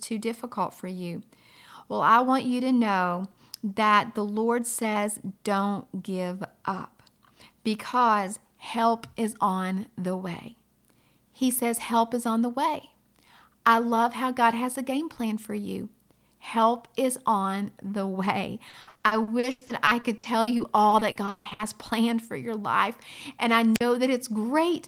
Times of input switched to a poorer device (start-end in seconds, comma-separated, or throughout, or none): none